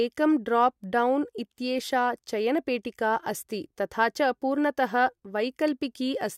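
No technical faults can be heard anywhere in this speech recording; the signal stays steady and intact throughout.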